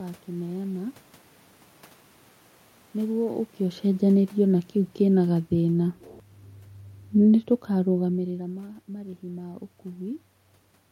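From 2.99 to 5.92 s, automatic gain falling: the gain control judged the input too loud or its background noise too strong and eased its gain down by about 4 dB. Unlike the talker moving near 3 s, the room noise sinks along with the speech.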